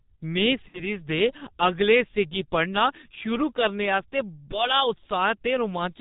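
A speech recording carried throughout by the G.723.1 codec, heavily damaged: nothing survives above 4 kHz, consonants smear, and the voice turns muffled and hoarse, which fits a stream of around 6 kbit/s. A spectrogram shows a hard ceiling at 4 kHz and blocky, slowly changing formant bands. From 0.68 to 0.89 s there is VoIP packet loss concealed by the speech codec. About 60 ms of audio went missing, consistent with two 30 ms frames, and the decoder filled the gap by repeating its last pitch and filter settings at falling gain. This produces a stretched, fading sound, and the sound stays weak briefly after real data resumes. On a waveform the envelope sags there. A spectrogram shows the last spectrum frozen and decaying in place.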